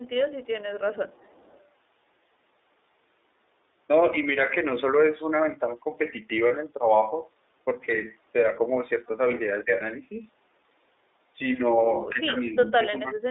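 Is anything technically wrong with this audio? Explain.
Yes. The speech clip carries several technical faults.

Throughout, the iLBC codec limits the band to about 300 Hz to 3.7 kHz with 30 ms frames, which fits its 13.33 kbps mode. It gives a plainly rough, slightly synthetic speech character.

From 0.02 to 0.72 s there is an echo leak. A very faint copy of the speech returns about 377 ms late, likely from a loudspeaker echo the far end's canceller left behind.

At 6.48 to 6.52 s, a 30 ms gap is concealed, consistent with one lost iLBC frame. The decoder repeats the last pitch cycle, so the gap sounds like a brief held, buzzy vowel before the speech recovers immediately.

The speech is suppressed in double talk twice, likely because the echo canceller mistook overlapping speech for echo. From 9.65 to 9.8 s the level dips moderately. From 12.98 s to the end it nearly cuts out.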